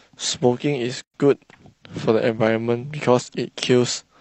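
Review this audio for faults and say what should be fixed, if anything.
Gap at a join of encoded pieces, 1.02 to 1.14 s: the speech stops for about 118 ms with smeared edges, then resumes where it left off, because separately encoded segments were joined with their encoder start delay and final-frame padding left in. Prevent it by trimming each segment's encoder delay and padding before joining, or by encoding the audio as one continuous stream.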